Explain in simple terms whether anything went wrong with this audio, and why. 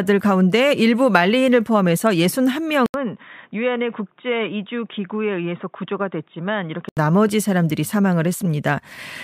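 Input switched to a poorer device, from 2.86 to 6.97 seconds. After a brief 80 ms gap, the speech turns dull and boxy, with nothing above about 3.8 kHz. It also gets somewhat quieter and picks up a different background noise. At 6.97 seconds the fuller sound returns. This is likely the recording switching to a lesser microphone or a headset's call mode partway through, then switching back.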